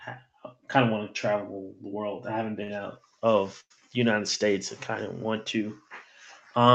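At 2.63 to 2.70 s a packet arrives late and the jitter buffer runs dry, so the receiver stretches the last bit of speech for about 49 ms until the data turns up. This is a short stall from a late packet: one sound is held slightly too long, with a faint buzzy smear, and the speech then resumes from the same point with nothing lost, just shifted about 49 ms later.

From 3.60 to 3.72 s there is a call audio freeze, likely caused by packets being held up in transit and the buffer emptying again. The last sound is drawn out as a fading buzz and then drops to silence for about 50 ms, adding roughly 100 ms of filler in total. When audio resumes, it picks up exactly where it stopped, so nothing is missing but the speech is pushed about 100 ms later.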